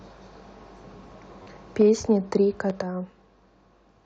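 At 1.43 to 1.46 s there is a repeated buffer. New audio arrived late, so a piece about 11 ms long, which fits a 512-sample buffer, plays four times. Hard joins give a brief buzzing stutter, and about 30 ms of sound is lost.

From 1.8 to 2.37 s the speech shows microphone overload. Peaks run about 3 dB past the converter's limit, likely from input volume set too high. Under one percent of samples are flattened. The loudest syllables gain a harsh, crackling edge.

At 1.82 s the microphone volume is stepped down by about 4 dB. The level of speech and background drops at once. This is likely the call software reacting to the clipped peaks.

At 2.70 s a second repeated buffer sounds once more. It is a single extra 11 ms piece, heard as a short click.

At 2.82 s a further step down of about 8 dB follows. The whole sound falls abruptly quieter.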